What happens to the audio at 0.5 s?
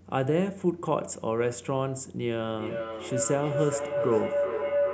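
Nothing goes wrong at 0.5 s; the audio plays through that moment intact, with no audible fault.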